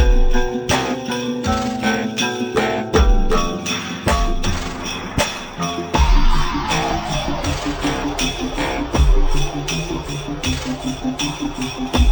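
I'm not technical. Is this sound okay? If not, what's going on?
No. This is stereo read as mono: the two channels' samples were read one after another as a single stream. Throughout the clip, from start to finish, everything plays at half speed and a full octave lower, sounding slow and deep.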